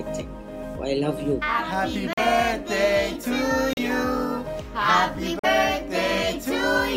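At 2.13 s, 3.73 s and 5.39 s the sound cuts abruptly to silence for about 40 ms, then resumes. This pattern is likely a Bluetooth stall, where delayed packets let the headphone buffer empty and playback paused until retransmissions arrived.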